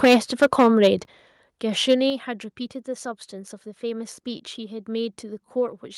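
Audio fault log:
0.03–0.88 s and 1.9–1.94 s, microphone overload: peaks driven about 10 dB, then about 3 dB, past full scale have their tops flattened, giving a harsh crackle, likely from excessive input gain.
0.05 s, 1.05 s and 2.1 s, microphone volume stepped down: level drops abruptly by about 3, 9 and 6 dB, likely the call software cutting input gain after clipping peaks.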